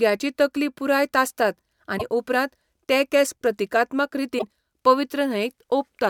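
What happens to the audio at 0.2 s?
Nothing goes wrong at 0.2 s; the speech is intact at that moment.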